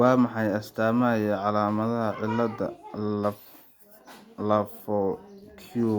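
No technical faults occur at any point in the speech, so there is nothing to describe in time order.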